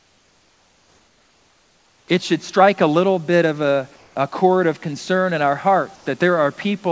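From 0.00 to 2.08 s, before "it should strike a", the room background gives way to steady, featureless comfort noise about 5 dB quieter. Discontinuous transmission is the likely cause. It recurs from 3.96 to 4.16 s, between "little bit of a" and "chord of concern in", about 3 dB down. At 5.96 to 6.06 s, after "of concern in our", the voice detector likely drops sound: about 50 ms vanish under steady noise.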